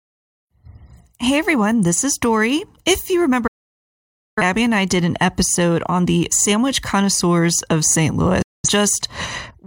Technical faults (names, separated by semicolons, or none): digital broadcast dropout